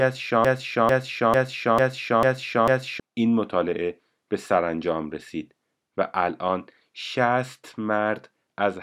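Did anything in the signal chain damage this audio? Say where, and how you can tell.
Yes. From 0.45 s to 3.0 s the speech falls into a broken-record loop. A 446 ms fragment repeats exactly, back to back, six times, and the speech meant for that span is lost. The likely cause is a stalled playback or stream buffer replaying its last fragment.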